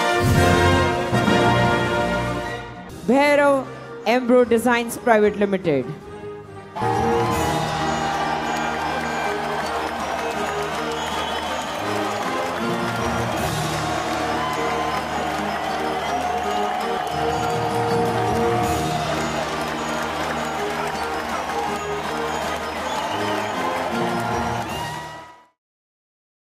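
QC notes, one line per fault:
Nothing to flag here, and the gentle fade-out that starts around the 24-and-a-half-second mark and finishes at 25.6 s is just a tidy editorial ending.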